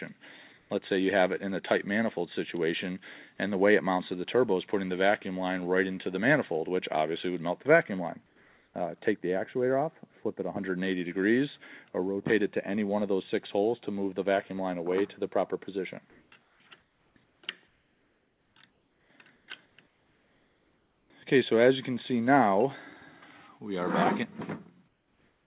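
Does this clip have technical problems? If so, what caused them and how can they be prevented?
Yes. The sender likely used discontinuous transmission, halting audio during detected pauses, so the receiver inserted synthetic comfort noise in place of the background. At 0.58–0.70 s, 8.26–8.74 s, 16.10–17.42 s, 17.68–19.10 s, 19.36–21.10 s and from 24.88 s to the end, the real background gives way to a smoother noise. In the first, second and last of these it is about 1 to 3 dB quieter. Turning off DTX in the sending codec prevents this.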